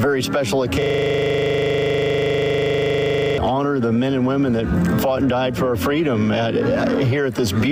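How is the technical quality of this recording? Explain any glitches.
A system hang loop runs from 0.82 to 3.38 s. The playback system froze while the sound hardware kept replaying its ring buffer, so one 40 ms slice repeats exactly, about 64 times, giving a rigid 25 Hz buzzing stutter before the sound resumes.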